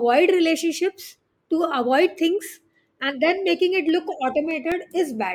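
From 3.89 to 4.92 s the speech carries CD scratch ticks: six regular clicks, the longest a couple of milliseconds, one per disc revolution where damage outran error correction and samples were patched. A spectrogram shows thin vertical broadband lines, and the waveform shows brief spikes or flattened gaps.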